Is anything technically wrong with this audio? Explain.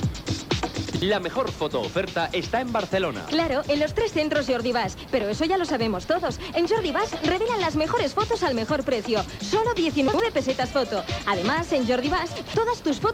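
Yes, there are chunks out of order at 0.9 to 1.02 s, 10.08 to 10.2 s, and 12.36 to 12.54 s. A 60 ms chunk turns up late and plays after its neighbour, or after two neighbours at 12.36 s, so each spot sounds briefly jumbled.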